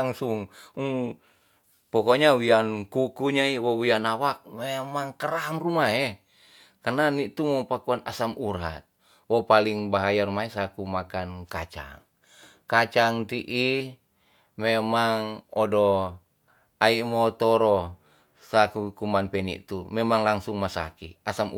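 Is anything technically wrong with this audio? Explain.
No, nothing technically wrong can be heard in this speech recording. There is nothing to point to at any moment in the clip.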